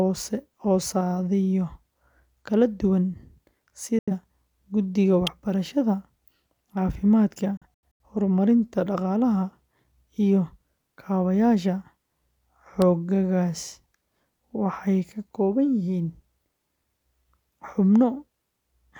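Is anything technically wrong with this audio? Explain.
Yes. There are two kinds of fault in this speech.

Digital broadcast dropout occurs twice. The receiver stopped getting decodable frames and muted its output until valid data returned. Near 3.99 s it fades out over about 3 ms and stays silent until 4.12 s, losing about 85 ms of speech, which points to two lost frames. From 7.57 to 8.03 s the muting is scattered: about 213 ms is lost in several short holes, the longest about 85 ms. The sound chops in and out there, and what fell in the gaps is simply missing.

Electrical switching spike occurs at 5.27 s and again at 12.82 s. A short arc from nearby equipment coupled into the audio line, most likely a switch or static discharge. Each is a sharp, very brief snap laid on top of the speech rather than replacing it.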